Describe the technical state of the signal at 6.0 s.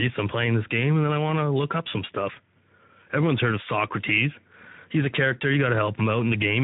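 Speex codec damage is present at 6.0 s, as it is throughout the clip. This CELP coder has too few bits to model the excitation, consistent with a rate near 11 kbps, so the speech sounds plainly noisy and hoarse.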